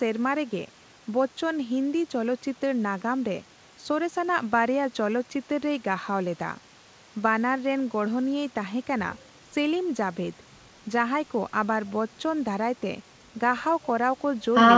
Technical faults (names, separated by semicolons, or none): none